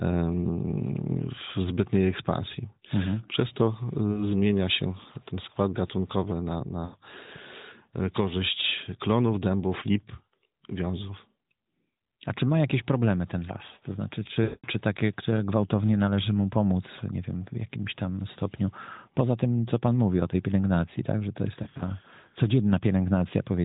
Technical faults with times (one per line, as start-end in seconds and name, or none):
4.12-4.28 lost AMR speech frames
6.86-6.96 lost AMR speech frames
14.44-14.68 lost AMR speech frames
21.64-21.83 lost AMR speech frames